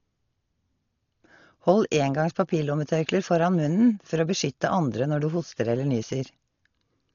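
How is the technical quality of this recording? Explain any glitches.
The technical quality is poor: the speech is heavily degraded by lossy coding from start to finish. Dolby Digital compression, likely the cause, is present throughout the clip. There is nothing above 7 kHz, which fits an encoder squeezed to around 40 kbps. At that rate the encoder narrows the band and leaves many frequency lines without detail, which the decoder fills with noise. The speech sounds dull and muffled, with a rough, fluttering grain around voiced tones.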